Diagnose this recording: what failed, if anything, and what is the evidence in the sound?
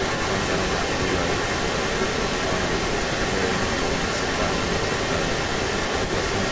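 Echo leak throughout the clip, from 0 to 6.5 s: speech comes back about 164 ms later as a second copy, roughly 5 dB louder than the original. The fault sits in call processing. The likely cause is a far end playing the call on a loudspeaker, where the echo canceller failed to subtract what its microphone picked up, so that residue was sent back. The echo shares the call's 8 kHz upper limit.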